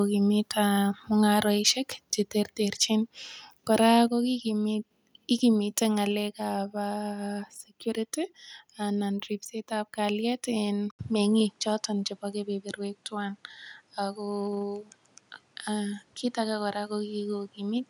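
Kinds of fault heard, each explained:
Microphone volume stepped down: at 4.08 s the speech and background fall together by about 4 dB in one step, likely the call software lowering input gain.
Input switched to a poorer device: from 10.91 s an 80 ms gap, then duller sound, a modest level shift and a new noise floor, likely a device change.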